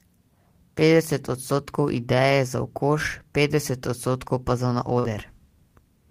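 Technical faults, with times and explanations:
4.99 to 5.05 s, short concealed packet loss: about 40 ms of the speech never made it to the decoder in time, so the receiver patched the gap by stretching out whatever it had last, carrying on the pitch where the sound was voiced and using shaped noise where it wasn't. Then it crossfades back into the real signal. That's why you get a quick smeared little wobble there rather than a clean hole, and any short consonant in that window can just disappear.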